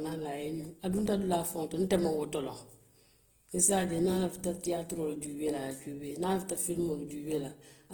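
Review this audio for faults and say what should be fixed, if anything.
Throughout the speech the tone is rough, grainy and noisy, with a fizzy texture where clean detail should be, though the band still extends to 20.1 kHz. The likely cause is Opus compression in its CELT music mode, filling starved bands with folded or noise energy, consistent with a bitrate near 16 kbps. Prevent it by encoding at a higher Opus bitrate.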